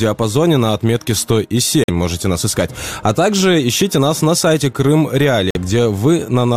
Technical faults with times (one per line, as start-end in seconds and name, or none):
1.84-1.90 corrupt frame muted
5.50-5.57 corrupt frame muted